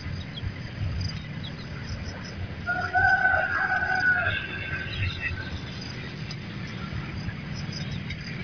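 No technical faults can be heard anywhere in the audio, and the signal stays steady and intact throughout.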